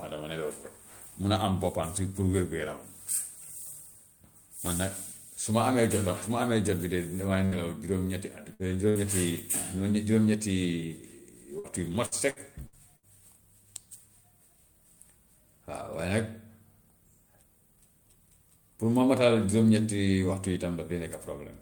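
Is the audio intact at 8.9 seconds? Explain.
No, not quite. Right around there, from about 8.89 to 8.98 s, there's a burst of packet loss. A short run of packets didn't arrive in time, so the receiver held on to the last bit of speech and faded it out for roughly 57 ms, giving a brief smeared, dying-off tail. When the stream picks up again, about 60 ms of the real speech is simply gone, so it jumps ahead slightly.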